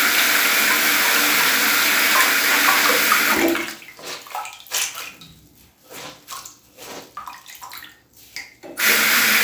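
Everyday sounds carry crude rate conversion for the whole clip: a gritty, inharmonic fizz trailing loud and bright events, roughly ten decibels under the sound, which fits linear interpolation from 32 kHz to 48 kHz. A spectrogram would show mirrored, unrelated tone lines above the real content.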